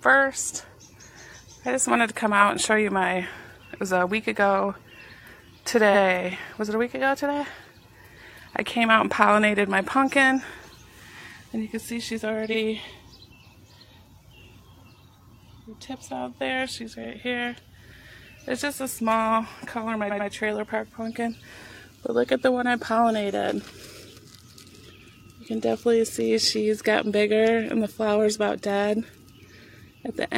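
Repeated frames at 5.90–5.99, 12.50–12.55, 17.00–17.06 and 20.07–20.25 s: blocks of 46 or 93 ms (the 20.07 s block twice) replay, producing a stutter and lengthening the audio.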